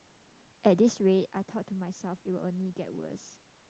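Nothing here points to a technical fault: the room noise underneath and the level shifts around 0.5 s and 3 s, where the talker moves relative to the microphone, are just part of the recording, and the speech comes through the call path as expected.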